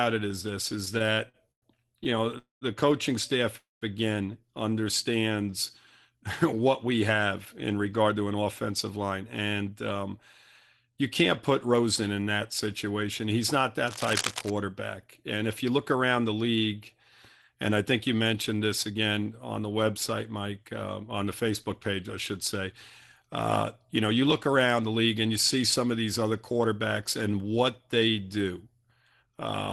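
Right at the start, from 0.85 to 2.35 s, there's a run of repeated stalls (stutter). The audio hitches eleven times, the longest hold about 105 ms, which adds up to roughly 271 ms of stretched-out filler. Packets were trickling in slower than playback, so the jitter buffer kept running dry and the receiver had to keep extending the last sound. Nothing actually drops out, but the speech drags and stumbles.

Straight after, at 2.38 to 2.64 s, comes a call audio freeze: about 229 ms where the last sound hangs on as a fading buzz and then goes silent for around 150 ms before picking up where it left off. A second one follows "coaching staff" at 3.57 to 3.84 s, about 241 ms long with roughly 180 ms of silence. Both are likely packets held up in transit until the buffer emptied, so a gap gets inserted rather than anything lost.

Right after "coaching staff again", from 4.70 to 5.51 s, there's a jitter buffer slow-down. 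Playback runs at 90% speed, with about 93 ms added by repeating single pitch periods to rebuild the reserve. The pitch holds steady, but the sounds get drawn out.

From 7.72 to 11.83 s, between "what we have" and "in that situation", there's a jitter buffer speed-up at 106%. The receiver trims tiny pitch-period slices, around a third of a second in total, to shed excess delay. The pitch stays the same, but the delivery sounds noticeably hurried.

At 13.87 to 14.50 s there's a burst of cable scratch noise, sitting at about 5 dB below the speech. It comes across as uneven scratchy rustling laid over the audio, likely from a worn cable or connector being jiggled so its contact resistance fluctuated rapidly.

From 15.08 s to 29.24 s a second jitter buffer speed-up runs at a gentler 103%, dropping about 400 ms in total. Only the timing is affected. It carries on until just before the end of the clip, with the Opus coding and its 12 kHz top end still audible underneath.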